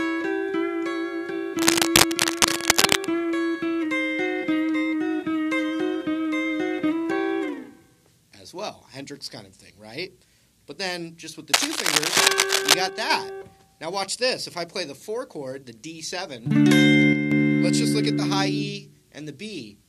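From 1.58 to 3.06 s, and again from 11.52 to 12.74 s, a burst of cable scratch noise rides over the audio, a little louder than the sound itself. It is dense, irregular rustling that lasts over a second each time, most likely from a worn cable or connector being moved so that its contact resistance jumps about. Unlike isolated clicks or steady crackle, it comes in uneven clusters that start and stop with the handling.

Shortly after the second scratch, from 12.89 to 13.10 s, and again from 17.13 to 17.32 s, one channel drops out. For about 0.2 s each time the level falls abruptly by 6 dB and then snaps back, likely because one stereo channel briefly lost signal, so the mono sum kept only half of what both channels shared. It differs from a fade or gain ride because the drop is an exact, instant halving with square edges and no gradual change.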